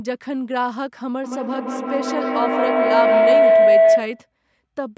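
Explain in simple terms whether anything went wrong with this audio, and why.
Something did go wrong: a feedback howl. From 1.24 s to 4.32 s, a steady tone around 700 Hz rises until it is louder than the speech. It pulses about every 150 ms. Two devices in one room were on the same call, so sound kept looping and growing.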